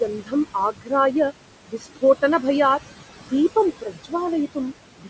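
Speech recorded over steady room noise sitting about 13 dB below the talker, with nothing above 8 kHz, as expected from call microphone processing. Noise suppressor artifacts run throughout: the suppressor pulls the background down by about 17 dB whenever speech stops and lets it back up under speech, so the noise floor pumps. A spectrogram shows the noise band blinking on and off around each phrase. Speech cut by the noise suppressor occurs at 0.2–0.33 s, 0.72–0.92 s, 1.68–2.03 s, 3.18–3.32 s, 3.81–4.13 s and 4.98–5.1 s, where the suppressor mistook quiet speech for noise and dropped it by about 12 to 18 dB, leaving those syllables faint and swallowed. The waveform shows sudden dips in the speech envelope there, and the spectrogram shows the speech energy fading.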